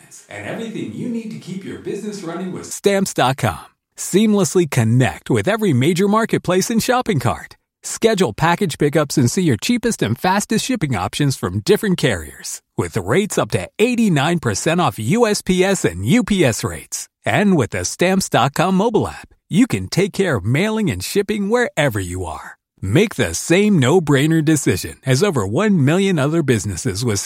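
Until 2.71 s, a likely switch to a distant microphone leaves the speech roomy, hollow and thin, about 10 dB quieter, over faint room noise.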